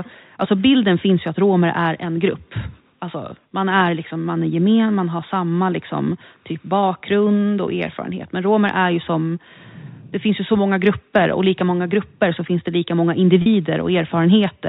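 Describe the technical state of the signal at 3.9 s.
At 3.9 s the speech is intact, carried cleanly through the G.711 telephone coding with no fault at that moment.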